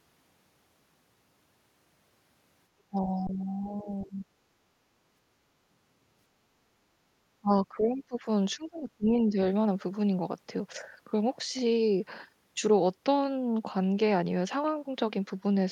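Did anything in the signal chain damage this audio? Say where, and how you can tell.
Yes. In the call-processing stage, the speech dips four times: 2.9 to 3.87 s, 4.04 to 4.26 s, 7.41 to 8.24 s and 8.56 to 9.38 s, sinking by about 10 to 20 dB. That's likely speech suppressed in double talk, with the echo canceller ducking the near talker while the far end spoke.

There's also an underrun with held sample in the driver or buffer stage at 3.27 to 3.29 s. The waveform freezes flat at its last value for 20 ms instead of dropping to zero. Around 20 ms of audio went missing.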